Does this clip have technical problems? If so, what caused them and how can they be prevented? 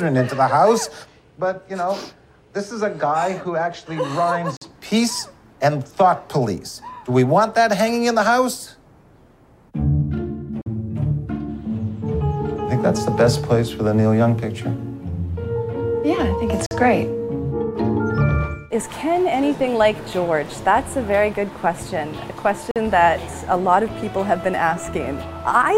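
Yes. The audio has a gap between chunks four times, at 4.57–4.62 s, 10.62–10.66 s, 16.66–16.71 s and 22.71–22.76 s. Each is a hole of silence about 48 ms long, and they repeat every 6.0 s. The sound appears to have been handled in 6-second blocks, with silence inserted at each join. Nothing is missing, but the flow breaks at every boundary. Prevent this by removing padding at chunk edges and queueing each block for gapless playback.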